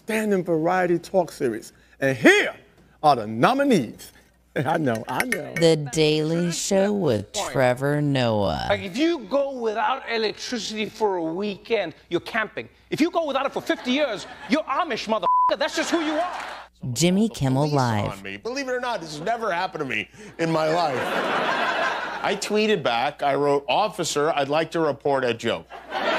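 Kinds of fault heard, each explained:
Time-stretched section: software likely slowed this part to 0.54 times speed while holding pitch, so from 5.30 to 11.80 s it drags.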